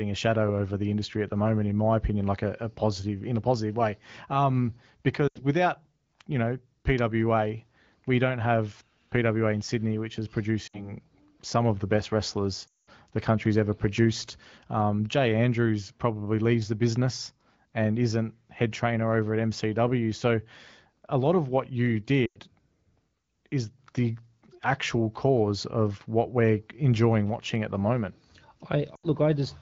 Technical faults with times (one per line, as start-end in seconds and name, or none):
5.28-5.45 lost AMR speech frames
10.67-10.93 lost AMR speech frames
12.67-12.90 lost AMR speech frames
22.25-22.40 lost AMR speech frames
28.95-29.09 lost AMR speech frames